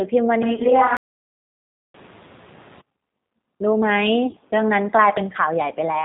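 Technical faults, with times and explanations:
Throughout, G.729 codec: the whole clip passes through an 8 kbit/s speech coder that rebuilds the voice from a vocal tract model, pitch predictor and a few pulses per frame, so nothing above 4 kHz survives and the voice sounds slightly rough and synthetic, unlike plain band-limiting, which stays smooth.
0.43 to 2.81 s, switch to a distant microphone: the voice suddenly turns roomy and hollow, with thinner bass and room noise rising to about 25 dB below the speech, while the level barely changes. The abrupt onset and return point to a likely change to a farther microphone rather than a slow fade.
0.53 to 0.67 s and 4.26 to 4.37 s, VoIP packet loss concealed by the speech codec: in each case the sound smears into a fading buzzy tone or coloured noise, about 60 ms and then 50 ms of lost audio scattered over roughly 100 ms, with runs up to 30 ms. 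The decoder extrapolates from its last frame, so the distortion lingers past the gap, unlike a clean dropout.
0.97 to 1.94 s, playback stall: the sound stops dead mid-flow for about 0.97 s. This total silence is likely the player starving for data, and it differs from packet-loss concealment, which fills gaps with decaying synthetic sound rather than nothing.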